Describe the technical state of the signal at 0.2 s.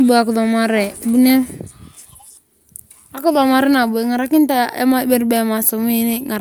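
The signal at 0.2 s is intact, with no audible fault at that point in the speech.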